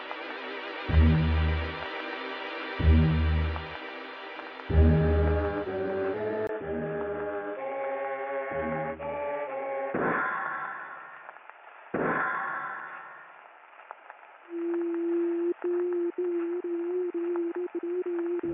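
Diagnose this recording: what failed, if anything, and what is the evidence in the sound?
At 6.47 s, after a 20 ms gap, the audio becomes dull, roughly 10 dB quieter, has nothing above 3.5 kHz, and carries a new noise floor around 35 dB down until the end. This points to the input having likely switched to a poorer device at the driver level.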